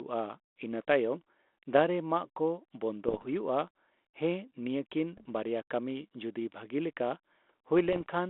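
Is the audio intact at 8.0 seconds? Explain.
No. Bit errors on an ADPCM link hit the 32 kbit/s G.726 stream from 7.79 to 8.09 s. Each flipped bit throws off the decoder's step size and predictor, so the damage rings on. That gives pops, rough bursts and brief jumps in level.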